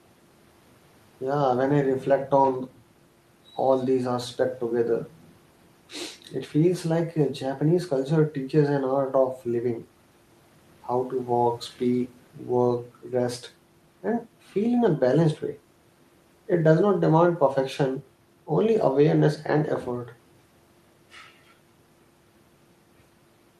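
No technical faults are audible anywhere in the recording.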